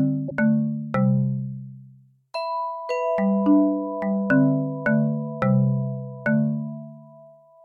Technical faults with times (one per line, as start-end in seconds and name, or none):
0.28-0.32 damaged data in a compressed stream